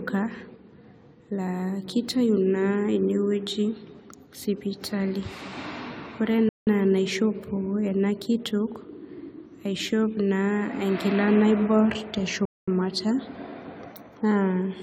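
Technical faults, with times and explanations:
Throughout: generation loss, with swirly, smeared, hollow speech and blurred attacks, likely from about five successive AAC-LC re-encodes at 96 kbit/s stacking quantisation noise.
6.49 to 6.67 s: playback stall, the speech dropping to silence for about 180 ms mid-flow before resuming, likely the player starving for data.
12.45 to 12.68 s: playback stall, a second silent gap of about 220 ms interrupting the speech, likely the same buffer underrun or blocked playback thread.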